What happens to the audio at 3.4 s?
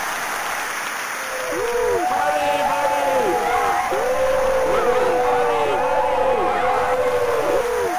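Nothing goes wrong at 3.4 s: the audio plays through that moment intact, with no dropout, click, glitch or other fault.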